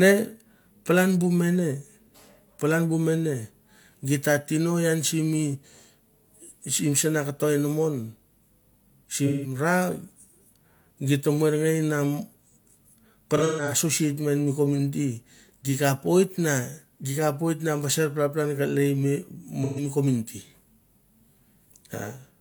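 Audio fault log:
9.27–9.55 s: AAC frame loss with concealment. About 0.17 s of lost audio is rebuilt from the last good spectrum, so it sounds smeared, noisy or phasey rather than falling silent.
13.36–13.73 s: AAC frame loss with concealment. About 0.21 s is lost in short pieces spread over roughly a third of a second. The longest piece is around 0.15 s, so smeared patches are heard instead of a single clean gap.
19.63–19.83 s: AAC frame loss with concealment. About 0.13 s is filled from the preceding spectrum. This gives a short smeared, noisy or phasey blur where a plain dropout would leave silence.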